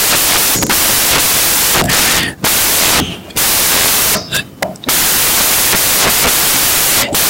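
A speech recording, but from start to finish it carries loud, hissing white noise caused by samples built from the wrong bytes. The reader is assembling each sample from misaligned or swapped bytes, so the rapidly fluctuating low-order bits land in the most significant position and dominate every value. The result is broadband noise at high level.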